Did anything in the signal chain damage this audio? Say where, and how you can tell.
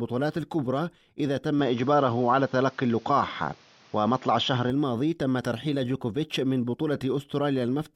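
Yes. Between 1.59 and 4.70 s the speech abruptly narrows, with nothing above 6.9 kHz, a level shift of a few dB and a faint new noise floor. There is no gap at either switch. This points to the input likely switched to a poorer device, then back.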